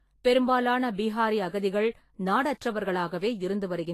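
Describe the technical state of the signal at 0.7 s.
At 0.7 s, as throughout the clip, the speech shows likely Vorbis compression. Treble sounds hissy and grainy, consistent with a low bitrate near 33 kbps. A spectrogram shows nothing above 14.2 kHz and a speckled, noisy upper band.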